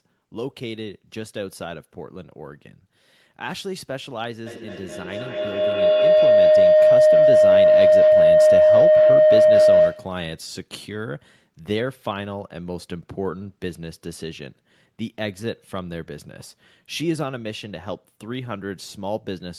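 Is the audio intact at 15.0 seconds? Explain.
Yes, the audio is intact at 15.0 seconds, with no dropout, click, distortion or other technical fault at that point.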